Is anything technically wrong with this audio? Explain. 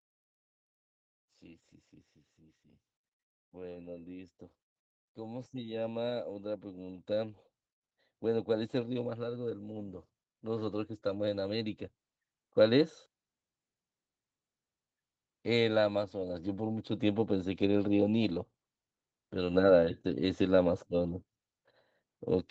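Yes. There is automatic gain rising from 3.38 s to 12.87 s. The level climbs steadily over those nine or so seconds, by about 14 dB in total. The automatic gain control judged the input too quiet and kept raising its gain. It does not know speech from background, so both lift together. The speech grows louder and the room noise swells with it. Nothing above 8 kHz is audible, which fits a call path.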